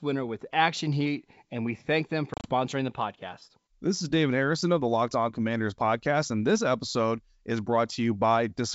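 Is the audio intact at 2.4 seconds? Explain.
No. From 2.34 to 2.54 s, between "we thank them for" and "the podcast", the sound breaks into hard-edged silent gaps, the longest 30 ms, and returns slightly distorted. This is packet loss on an ADPCM call: several packets, about 80 ms in all, vanished, and the decoder's predictor and step size briefly lost track of the sender's.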